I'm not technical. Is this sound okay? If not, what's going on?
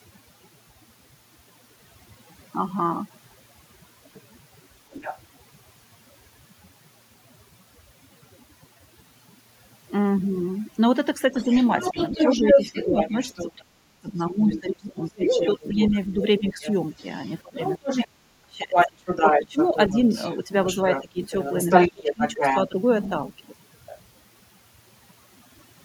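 No, it has three problems.

Overdone noise removal runs through the whole recording. A clean-up tool that strips background noise was set too strong. It turns down any band of sound that resembles noise, so the background sinks and breaks into twinkling, warbling specks, and quiet parts of the voice get trimmed along with it. Because it is present from start to finish, it is not tied to when anyone else talks, which separates it from the dips described below.

Other side's voice leaking through happens twice. From 4.14 to 5.19 s a second voice is heard, noticeably quieter than the main one. From 11.34 to 23.98 s it returns, now about as loud as the main speaker. This is likely the person at the other end playing from the talker's loudspeaker into the microphone, with the echo remover failing to take it out. The giveaway is an extra voice you can actually hear, not one missing.

Speech suppressed in double talk covers 11.31 to 22.79 s, during that same loud leak. 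While both people talk at once, the main voice keeps ducking, some dips going very far down and adding up to roughly four seconds in all. The likely cause is the echo remover mistaking the talker for echo and turning everything down. The difference from leakage is that here the voice you want is the one that goes missing.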